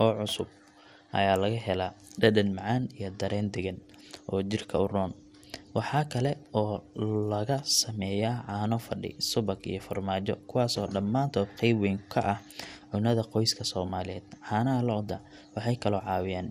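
Throughout, the speech sounds dull and gurglingly granular, likely from MP2 compression at a rate fitting about 80 kbps; a spectrogram shows flickering upper bands and nothing above 15.8 kHz.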